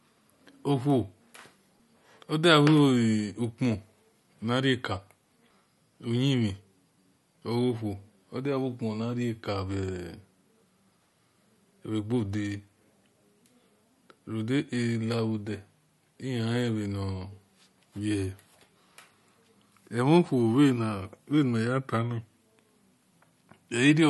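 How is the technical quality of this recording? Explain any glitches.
The quality is noticeably degraded throughout. The speech has a watery, swirly texture, with chirpy, metallic s sounds and smeared onsets, and nothing is heard above about 11.8 kHz. This is likely MP3 compression at a low bitrate, fitting roughly 46 kbps. Short of bits, the encoder cuts the treble at a fixed point and drops weak frequency components that flicker on and off between frames.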